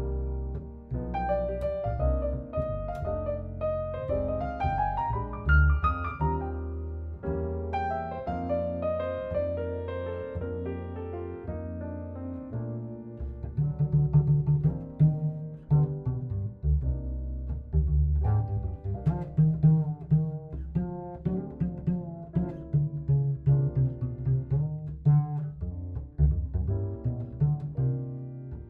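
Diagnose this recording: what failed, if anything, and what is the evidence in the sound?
Nothing in this recording points to a failure at any stage of the signal chain. There is no audible evidence of a defect to trace, so no stage calls for attention.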